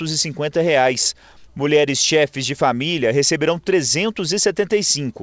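No technical faults can be heard anywhere here.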